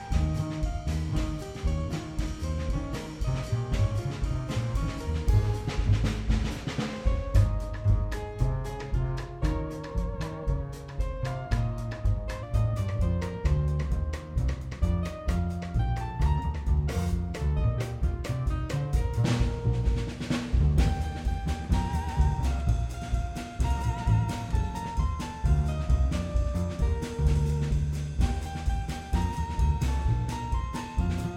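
From the start to 12.43 s the sound drags and sits about two semitones low, heavy and deep. This is a section at the wrong speed, running at 0.893 times its proper rate, likely from being fitted to a mismatched clock, so pitch and tempo fall together.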